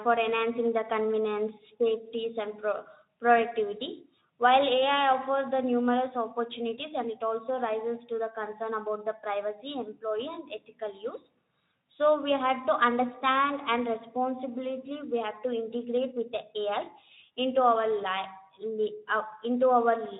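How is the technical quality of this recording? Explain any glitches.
The technical quality of this recording holds up, with no glitches to explain.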